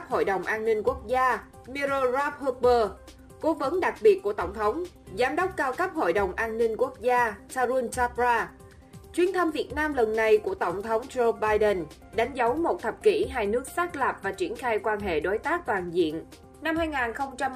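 From the start to 12.29 s, crude rate conversion leaves a gritty, inharmonic fizz that follows loud and high sounds, which fits a 48 to 44.1 kHz change made by dropping nearest samples. Its error, only about 30 dB down, forms tones unrelated to the sound, unlike harmonic clipping distortion.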